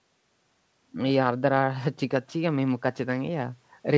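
No faults found in the speech; the band stops at 8 kHz, consistent with a wideband G.722 call path.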